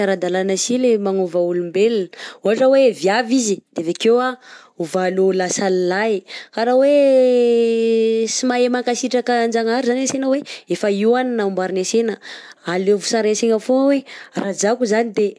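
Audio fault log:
No fault is logged for this speech clip.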